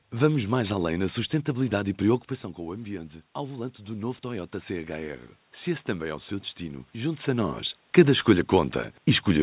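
Automatic gain rising runs from 2.56 to 5.30 s in this speech clip, just after "na sustentabilidade e preocupação". Around 2 s the talker moves back and the level at the microphone falls by about 11 dB. The automatic gain control responds by slowly adding about 4 dB over nearly three seconds, so voice and room noise swell together. The band stops at 4 kHz, consistent with a G.711 mu-law call path.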